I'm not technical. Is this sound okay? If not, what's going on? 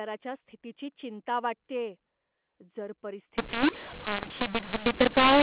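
No. From 3.38 s to the end, speech turns harsh and pauses hiss. This is a mu-law and A-law mix-up: telephone audio decoded with the wrong scale.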